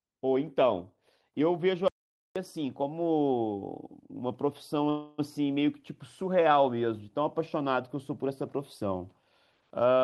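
At 1.88 s the speech stops dead and returns at 2.36 s. For nearly half a second there is silence, with no room tone or background at all, and the speech that fell in that stretch, about 477 ms of it, simply is not there. This is an audio dropout to silence. The input was likely lost for a moment, perhaps through a broken link or a brief mute, while the recorder kept writing silence.

From 4.89 s to 5.20 s the last bit of speech hangs on as a smeared, buzzy continuation that never drops into silence. Then the speech picks up exactly where it left off, so nothing is missing. Instead, 288 ms of artificial fill has been inserted. This is a call audio freeze. Packets were likely held up in transit, so the jitter buffer ran dry and the receiver stretched the last sound until they arrived, which added 288 ms of delay.

In the final moments, from 9.97 s to the end at 10.03 s, the speech suddenly rushes forward at about 164% of normal speed with no change in pitch, so it sounds hurried. 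This is a jitter buffer speed-up. The buffer was holding more audio than its target, so the receiver trimmed out short pitch-period slices, about 50 ms in total, to pull the delay back down.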